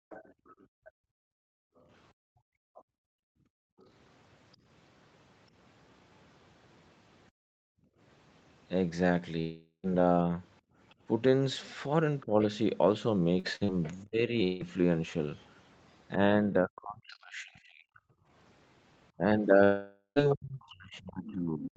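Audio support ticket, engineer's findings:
Background gated by the echo canceller: room tone pumps down and back, 0.00–3.79 s (about 3 s affected in total) and 7.31–10.77 s (under a second in total). Deepest dips about 40 dB. The echo canceller clamps mic gain while the loudspeaker plays, then releases.

Other side's voice leaking through: faint second talker under the near-end speech, 0.09–4.57 s (about 20 dB below speech), 10.89–12.26 s (about 30 dB below), 15.36–17.15 s (about 35 dB below) and 21.26–21.32 s (about 20 dB below). Likely residual echo: the far end plays on the device loudspeaker and the echo canceller does not fully remove it from the mic.

Long network dropout: audio stops with a fading buzz or hiss, then silence, 9.39–9.86 s. About 440 ms lost, including roughly 60 ms of dead air. Likely a network stall. The receiver extends the last sound, fades it, and resumes past the gap.
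Long network dropout, 14.43–14.63 s: about 160 ms missing. The fade-out concealment covers the whole gap, with no silence. Likely the same mechanism as above.
Long network dropout, 19.64–20.19 s: about 520 ms missing, the longest gap, ending in roughly 80 ms of silence. Likely a network stall, concealed then muted.

Speech suppressed in double talk: near-end speech dips, dulls and chops from 12.26 s to the end of the clip, with drops of up to about 40 dB. Likely the echo canceller failing to separate the local talker from the loudspeaker echo while both sides speak, so it attenuates both.

Short concealed packet loss: brief smears or wobbles at 13.39–13.46 s, 13.64–13.71 s and 14.08–14.14 s. About 40 ms missing each time. Lost packets bridged by extrapolating the prior pitch or noise, then crossfaded back into the real audio. Short consonants may drop.

Burst of packet loss: held sound then fade, 13.55–13.63 s. 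About 40 ms lost and roughly 50 ms concealed. Consecutive packets late or lost. The decoder sustains the last sound at falling level, then jumps ahead, and the audio between is gone. It sits inside the 13.39–13.71 s loss cluster.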